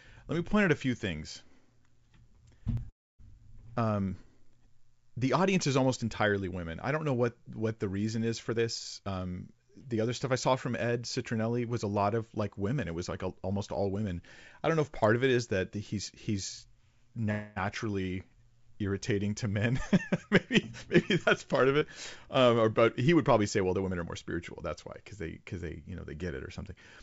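At 2.77 s there's a jump ahead, likely a dropped buffer (overrun) where around 40 ms of audio was overwritten and the two sides were butted together. Right after, from 2.90 to 3.21 s, comes what's likely a call audio freeze: the last sound hangs as a fading buzz and falls silent for about 0.27 s, inserting a 292 ms gap before resuming with nothing lost. From 8.50 to 10.37 s, between "what the reason is" and "saw from", a jitter buffer speed-up trims pitch periods to drain excess delay, so the speech runs at 116% with the pitch unchanged and roughly 0.3 s removed, sounding hurried. From 17.31 to 17.58 s there's another likely call audio freeze, this time 248 ms where the stretched sound keeps buzzing without going silent, then picks up where it left off. From 21.80 to 21.83 s a short concealed packet loss smears a tiny spot, with 40 ms missing and 8 ms of continued sound blended back in. 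After "but he would probably", from 23.57 to 24.35 s, a second speed-up runs at 109% and removes about 70 ms. Through all of it, the G.722 call path leaves nothing above 8 kHz.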